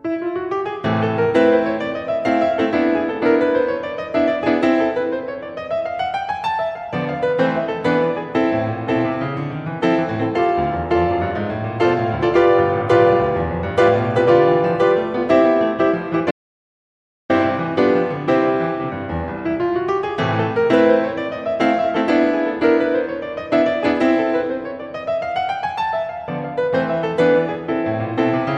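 At 16.31 s the music stops dead. This is an audio dropout to silence. The gap runs until 17.30 s, so just under a second of music is missing. It is silent, with no room tone or hiss underneath. The music cuts out mid-flow and resumes mid-flow. This most likely comes from the input being lost for a moment while recording carried on writing silence. Whatever played in that second is gone.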